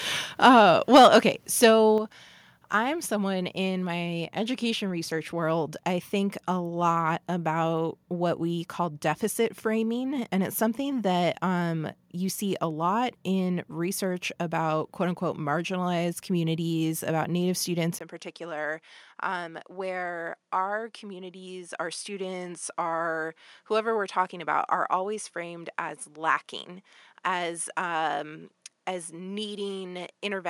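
Input volume that was likely set too high drives the speech peaks into the converter's limit at 0.47 to 0.49 s, 0.94 to 1.17 s and 1.63 s. Each is a microphone overload. The flattened tops, up to about 4 dB over, give a brief harsh crackle on the loudest syllables. Inside the overload at 0.97 s, and again at 1.98 s, the input gain is stepped down, likely by the call software reacting to the clipping. Voice and background drop together in a single step, by about 2 dB and then about 5 dB. At 18.0 s the input is likely switched to a poorer device. After a 20 ms gap the speech becomes duller and narrower in band. It is also roughly 10 dB quieter and carries a faint new noise floor far below the voice.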